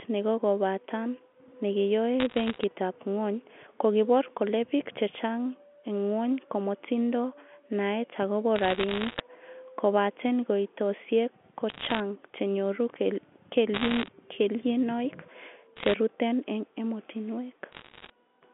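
Bit errors on a digital phone line hit at 2.2–2.64, 8.56–9.2, 11.7–12.0, 13.74–14.08, 15.76–15.94 and 17.72–18.1 s. Flipped bits on the A-law line, roughly one to one and a half percent, corrupt single samples into sharp ticks, heard as bursts of crackle over the narrowband speech.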